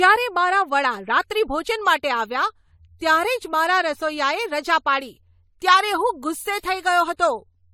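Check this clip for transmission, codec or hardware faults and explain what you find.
One codec fault runs through the whole clip: generation loss. The speech has likely been through AAC-LC encoding and decoding about three times. Each pass re-quantises on a shifted frame grid, so noise and spectral holes pile up. The result sounds swirly, smeared and hollow, with blurred onsets, more degraded than one encode at 64 kbit/s would explain. Content stops near 19.9 kHz.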